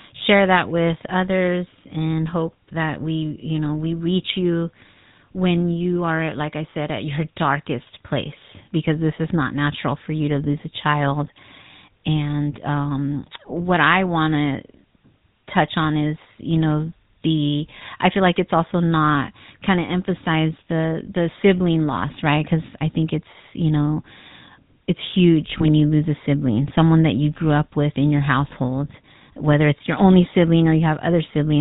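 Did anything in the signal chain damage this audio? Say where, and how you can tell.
Yes. GSM full-rate codec damage runs through the whole speech clip, at the codec stage. The audio stops at 4 kHz and carries a plainly audible buzzy, gravelly roughness, which fits a 13 kbps full-rate encoder rebuilding the vocal tract from sparse, regularly spaced excitation pulses.

Lost GSM frames occur at the network stage at about 25.58 to 25.65 s, between "it's huge" and "you lose a sibling". A brief rough, metallic ring replaces the sound there, which points to a single lost 20 ms frame that the decoder concealed by repeating the last good frame.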